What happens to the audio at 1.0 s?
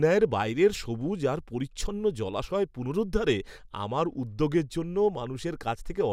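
At 1.0 s the speech runs straight through with no dropout, click, distortion or other audible fault.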